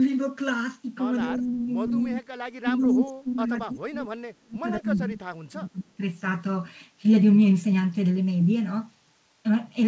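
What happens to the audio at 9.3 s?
Nothing goes wrong at 9.3 s: the speech carries on intact through the call path, with no dropout, glitch or distortion at that point.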